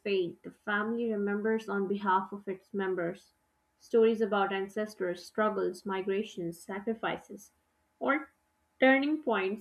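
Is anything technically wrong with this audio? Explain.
No, nothing technically wrong can be heard here.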